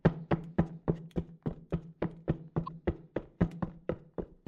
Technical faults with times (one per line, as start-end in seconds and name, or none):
2.65-2.68 repeated frames